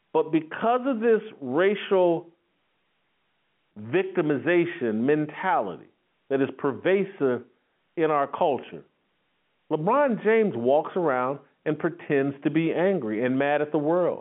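Nothing is technically wrong with this speech clip, which comes through ordinary G.711 telephone coding with its usual narrow line band of about 150 Hz to 3.4 kHz.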